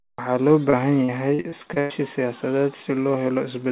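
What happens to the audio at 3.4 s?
Nothing goes wrong at 3.4 s: the speech carries on intact through the WebRTC call path, with its G.711 A-law coding leaving nothing above 4 kHz.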